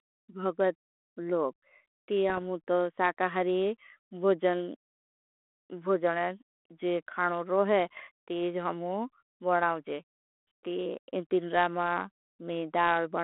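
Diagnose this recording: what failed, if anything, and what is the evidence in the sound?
The fault sits in the codec transport: bit errors on an ADPCM link carrying G.726 at what sounds like 32 kbit/s telephone band. Rough, popping bursts with brief level jumps hit the speech from 2.29 to 2.38 s, after "भगत लोग ती" and before "अमुतो साकाहरी", and from 7.93 to 8.01 s, just before "ती जी". Each flipped bit corrupts the decoder's adaptive step size and predictor, so the damage rings on for some milliseconds, consistent with an error rate of a fraction of a percent.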